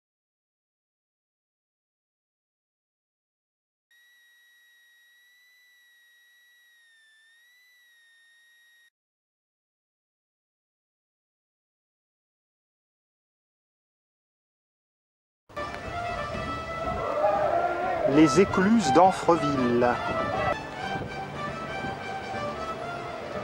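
From 3.91 s to 8.89 s a switching supply whistle sits under the sound. It is a thin, high tone near 2 kHz. The pitch wanders between about 1.75 kHz and 2 kHz rather than holding still. It stays faint, roughly 35 dB below the main signal. A switching power supply is running in an audible burst mode or beating with another one, and its rate shifts as the load changes.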